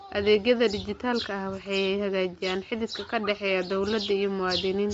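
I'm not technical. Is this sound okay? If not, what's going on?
No. Throughout, the speech sounds grainy and breathy, with nothing above 7.7 kHz. This is likely Bluetooth LC3 compression, which thins detail to save data.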